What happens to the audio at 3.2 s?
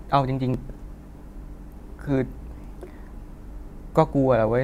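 Nothing goes wrong at 3.2 s: the audio there is intact, with no dropout, click, distortion or other fault.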